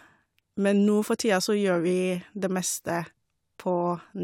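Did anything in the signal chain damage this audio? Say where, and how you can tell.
No, nothing in the signal chain has damaged this speech recording. I can't point to any stage that leaves an audible mark on it.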